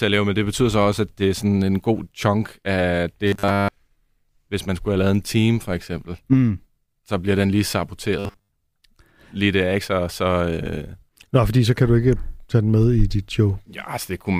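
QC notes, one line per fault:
3.27–3.71 s, after "en god chunk af": robotic sound from repeated short buffers. The speech turns into a rigid, metallic 100 Hz buzz, likely from a roughly 10 ms slice repeating while most of the real audio is skipped.
8.19–8.51 s, after "så bliver den lige": robotic sound from repeated short buffers. The same fixed 100 Hz metallic drone loosely follows the speech, likely from short stretches looping in place of most of the late-arriving audio.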